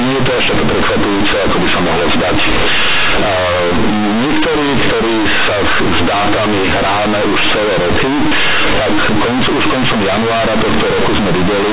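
Companded audio read as linear runs through the whole speech clip: mu-law bytes are being played back as plain linear 8-bit samples, with no expansion step. Because mu-law packs level logarithmically, each small crossing of zero now throws the output across roughly half its range, so faint passages come out as loud as strong ones. The result is harsh, buzzy, overdriven distortion, and the pauses fill with loud noise. Underneath it the telephone band of the mu-law coding itself can still be heard, cut off at 4 kHz.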